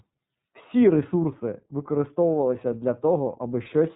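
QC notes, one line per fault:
Throughout: iLBC codec; nothing above 3.8 kHz, speech plainly rough and synthetic from independently coded 30 ms frames, fitting 13.33 kbps, unlike a clean low-pass.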